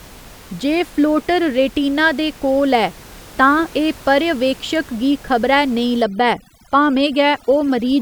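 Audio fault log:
6.02–8.01 s, overdone noise removal: after "पर्यवेक्षक गी खबरै नेईं", over-strong suppression mutes bands near the estimated noise, leaving a lowered background that breaks up into twinkling specks.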